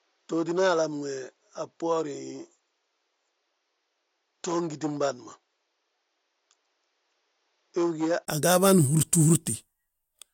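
From the start until 8.27 s the speech is duller, nothing above 7.3 kHz, quieter and with faint background noise; a brief gap then brightens it, likely an input switched to a poorer device.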